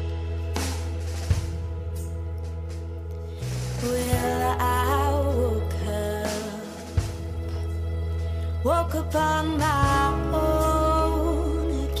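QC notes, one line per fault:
No faults found on any path; nothing to log.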